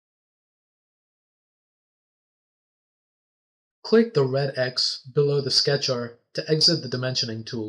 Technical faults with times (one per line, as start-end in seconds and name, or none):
4.96 dropped samples